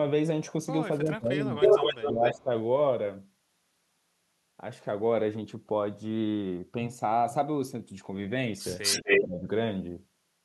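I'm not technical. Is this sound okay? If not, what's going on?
No. From 1.03 to 1.58 s, 1.98 to 2.50 s and 9.03 to 9.48 s the voice drops sharply, likely speech suppressed in double talk, with both sides talking at once. An echo leak adds a copy of the voice 248 ms late from 1.60 to 2.34 s and 8.82 to 9.21 s.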